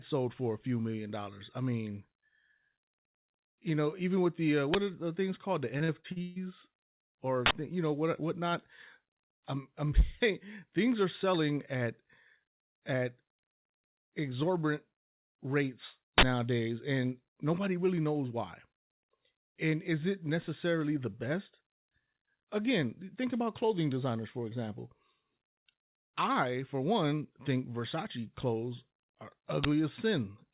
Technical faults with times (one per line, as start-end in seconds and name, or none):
4.74 uninitialised buffer
5.78-6.38 repeated packet loss (robotic sound)
7.46-7.51 uninitialised buffer
16.18-16.23 uninitialised buffer
29.64 uninitialised buffer